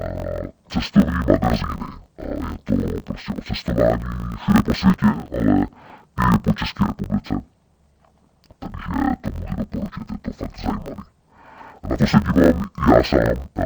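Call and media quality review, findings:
Speech dull, robotic, an octave low, with a steady 50 Hz buzz, throughout. Interleaved audio read as planar in the capture/decode buffer handling: 20 ms blocks split into halves, each played at half speed, chopping at the block rate.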